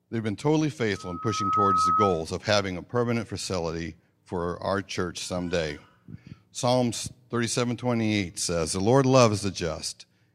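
A microphone in this speech recording is picking up the loudspeaker it feeds, and at around 1.3 kHz the loop gain climbs past unity, producing loudspeaker feedback squeal from 0.95 s to 2.23 s. The tone recirculates through the loop and builds on itself in well under a second, swelling into a piercing whistle that rises several decibels above the speech before it stops.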